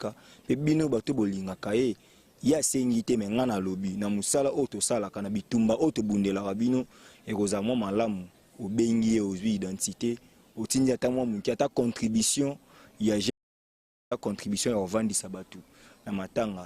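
The input feeding the recorder was most likely lost for a moment, through a disconnected device, a failed link or a stray mute, while the recording carried on writing silence. The result is an audio dropout to silence from 13.30 s to 14.11 s, a gap of about 0.81 s. The sound cuts off abruptly in mid-flow and resumes just as suddenly. The gap holds no room tone at all, and whatever was playing during it is gone.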